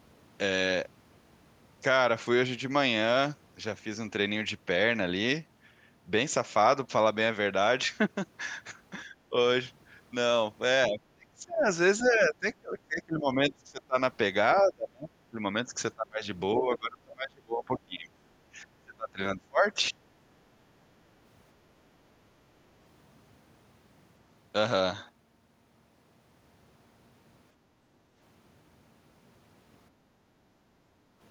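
A speech recording whose talker repeatedly dips, with speech suppressed in double talk at three points. From 9.09 to 9.35 s there is only a slight sag of about 5 dB lasting around a tenth of a second, but from 10.89 to 13.96 s the voice is pushed down by as much as about 25 dB, affected for roughly two seconds of that span. From 14.62 to 19.99 s the same thing happens more deeply, to about 30 dB, for around three seconds in total. The likely cause is that the far side was talking at the same moment, and the echo canceller, unable to tell this talker from the loudspeaker echo, turned everything down together. Inside the second stretch, at 12.04 to 12.08 s, a brief scrap of a second voice slips through at roughly 25 dB below the talker. This is the other side's voice leaking through, likely residual loudspeaker sound that the canceller failed to subtract from the microphone. Near the end the room tone itself drops out, first from 27.56 to 28.16 s by about 7 dB for roughly half a second, then from 29.91 to 31.19 s by about 8 dB for around a second and a half. 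This is background gated by the echo canceller, which clamped the microphone while the loudspeaker was playing and released it afterwards.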